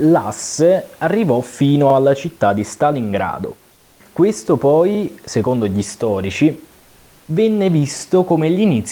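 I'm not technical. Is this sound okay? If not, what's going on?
No. Overlapping chunks occur at about 1.90 s (between "arrivò fino" and "alla città di"), 4.95 s (just before "secondo gli storici") and 7.99 s. The audio was handled in 3-second pieces that overlap, so a tiny 44 ms slice plays twice at each join, causing a brief stutter.

Comfort noise in place of the background appears at 3.74 to 4.00 s and 6.80 to 7.28 s, right after "secondo gli storici". In these pauses the room's real, faint background is swapped for a flat, slightly quieter artificial hiss, likely because the sender stopped transmitting while nobody spoke.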